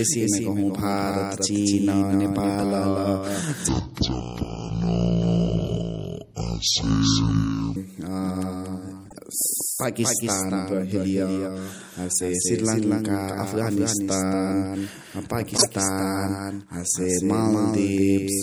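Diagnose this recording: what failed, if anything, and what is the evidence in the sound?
A second copy of the speech is mixed in, most likely by a slower duplicate capture path or a misaligned edit. The doubled audio track trails the original by roughly a fifth of a second, about 5 dB quieter, full-band and dry. It gives every syllable a clean slapback with no room tail.

At the codec stage, MP3 compression has been pushed hard. The clip likely went through a low-bitrate encoder, around 64 kbps. Sibilants chirp metallically, and the weak spectral detail swirls in a watery way throughout. Consonant attacks are smeared.

From 3.69 to 7.76 s, a section plays at the wrong speed, at 0.582 times its proper rate. This is likely a playback or editing step running it against the wrong clock. Pitch and tempo drop together, so the speech sounds deep and dragged, roughly 10 semitones low, before snapping back.

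At the decoder, a corrupt frame was decoded rather than concealed at 9.05 to 9.18 s, 12.15 to 12.23 s and 15.57 to 15.66 s. Each lasts about a handful of MP3 frames. Flipped bits put energy at the wrong frequencies, which is heard as short squeaky, noisy blips.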